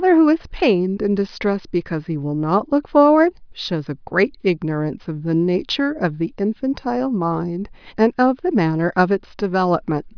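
No technical faults can be heard at any point in the recording.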